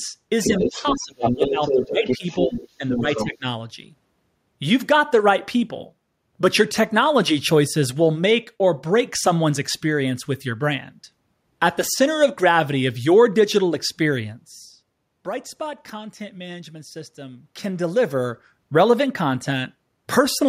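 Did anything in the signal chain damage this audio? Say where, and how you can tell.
Yes, in the call processing. The other side's voice leaking through runs 0.43 to 1.01 s, 1.21 to 2.68 s and 2.89 to 3.37 s, only about 5 dB under the talker. That's likely loudspeaker echo the echo canceller didn't fully remove.

Likely the same stage, different symptom: speech suppressed in double talk. The talker drops out from 0.48 to 2.24 s, by about 20 dB at worst, then briefly at 2.47–2.58 s and 2.78–2.84 s, and by about 15 dB at 3.0–3.46 s.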